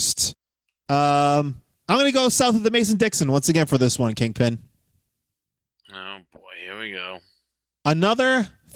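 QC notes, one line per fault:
Nothing stood out on listening to this speech clip.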